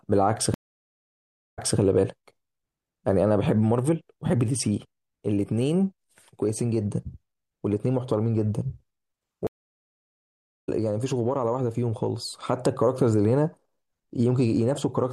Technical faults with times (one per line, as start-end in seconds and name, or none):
0.54-1.79 stream reconnect
9.47-10.69 stream reconnect